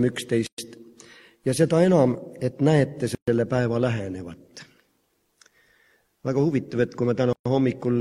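The sound drops out three times, at 0.47, 3.15 and 7.33 s, for roughly 116, 127 and 127 ms, then resumes right where it left off. That's a gap at a join of encoded pieces: separately encoded chunks were stuck together with each run's start-up silence and end padding left in.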